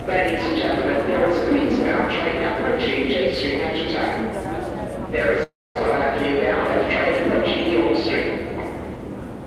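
From 5.43 to 5.77 s the last sound is carried on as a fading buzz or hiss that sinks into about 230 ms of silence, then the audio resumes with about 320 ms missing. This is likely a long network dropout, concealed by the receiver.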